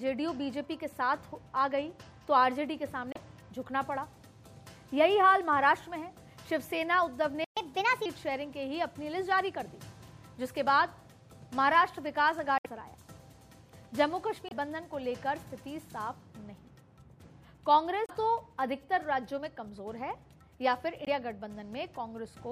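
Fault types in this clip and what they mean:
Damaged data in a compressed stream: Short chirps or blips at 3.12, 12.58, 14.47, 18.06 and 21.04 s, each under a tenth of a second. The decoder misreads broken frames and resyncs. Unlike a stall, the cause is broken data, not the player running short.
Playback stall: At 7.44 s the sound simply stops for about 122 ms, likely because the player ran short of data or its thread was blocked. The gap is clean and empty, with none of the squawk that damaged frames produce.
Catch-up at higher speed: Right after the stall, from 7.57 to 8.06 s, the audio runs at 1.25 times normal speed, sounding about four semitones higher. Tempo and pitch rise together, which separates this from a plain pitch shift.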